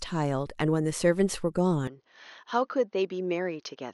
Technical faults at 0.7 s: none

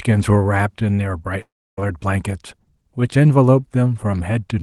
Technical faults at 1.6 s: long network dropout

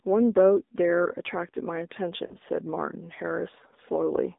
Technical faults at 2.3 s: AMR narrowband mobile codec; lost AMR speech frames

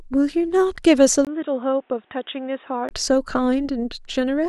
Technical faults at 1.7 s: input switched to a poorer device

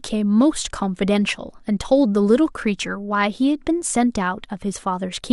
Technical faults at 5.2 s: MP2 compression

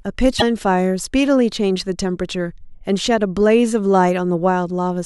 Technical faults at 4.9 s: none

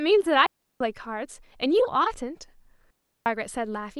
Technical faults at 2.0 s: none

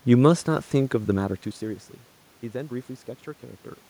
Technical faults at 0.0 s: none

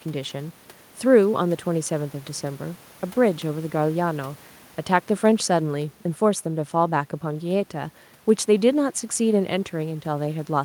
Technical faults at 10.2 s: none

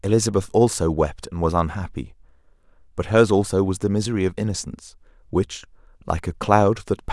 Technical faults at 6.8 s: none

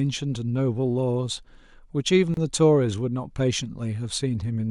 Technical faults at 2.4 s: gap at a join of encoded pieces

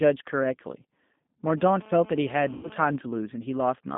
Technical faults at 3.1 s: G.729 codec; GSM signalling bursts

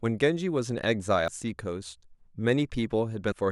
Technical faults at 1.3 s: damaged data in a compressed stream

